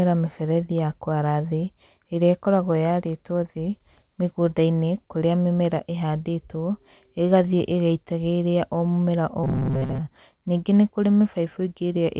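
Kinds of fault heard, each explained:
Robotic sound from repeated short buffers: after "ĩgĩitagĩrĩria o mũmera o", from 9.44 to 10.02 s, the sound becomes a rigid metallic buzz at 133 Hz, likely a 7.5 ms slice replayed through most of that stretch. Unlike dropouts, there are no gaps, just a fixed-rate buzz.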